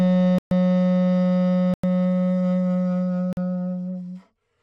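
Blocks of digital silence at 0.38–0.51 s, 1.74–1.84 s and 3.33–3.37 s: the sound drops to zeros without a fade. This leaves holes of 128, 96 and 43 ms. The last hole fits a 2048-sample block.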